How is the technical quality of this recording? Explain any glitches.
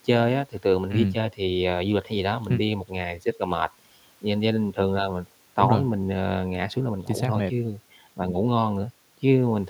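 Nothing in this speech recording needs explaining, as there are no glitches to point to anywhere in it.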